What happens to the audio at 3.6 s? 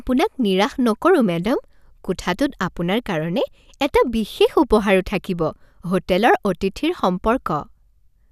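Nothing goes wrong at 3.6 s; the speech continues cleanly through that moment with no audible fault.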